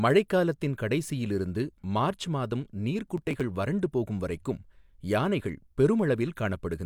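From 3.18 to 3.41 s the speech picks up a gritty burst of processor overload crackle. The processor fell behind and missed about ten very short buffers, each skipped outright, so tiny hard-edged gaps pile up into tearing that clears once the load drops.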